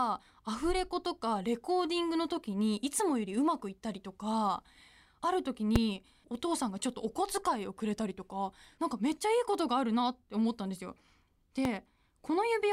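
Speech clip with two loud pops, at 5.76–5.78 s and 11.65–11.68 s, each a single sharp spike well above the speech and a full-height vertical line on a spectrogram, likely from an electrical voltage pulse.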